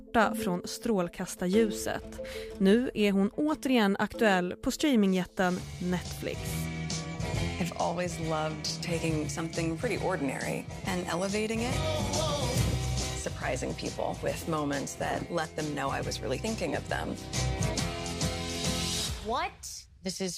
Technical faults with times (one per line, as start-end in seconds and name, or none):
none